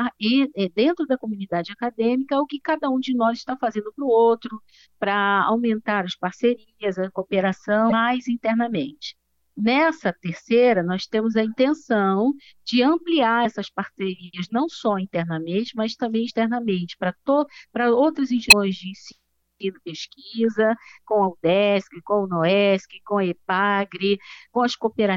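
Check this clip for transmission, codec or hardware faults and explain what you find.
Four short bursts of damaged data in a compressed stream. They fall at 7.88 to 7.92 s, at 13.44 s, at 16.29 s and at 18.48 to 18.53 s. Each lasts under 50 ms. The bytes in those frames are corrupted. The decoder misreads them, loses its place in the stream and hunts for the next valid frame header. Each event sounds like a brief chirp, squawk, click or short hole cutting across the audio.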